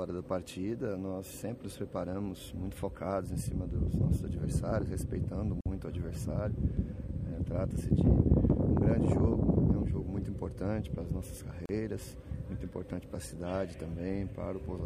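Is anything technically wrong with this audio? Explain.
Yes. There are two gaps at joins of encoded pieces, from 5.61 to 5.66 s (about 49 ms) and from 11.66 to 11.69 s (about 34 ms), roughly 6 s apart. The audio was encoded in separate pieces and butted together without trimming, so each piece's encoder start-up silence and end-of-piece padding remain. The result is a short dropout with edges smeared by the codec, after which the sound resumes exactly where it stopped.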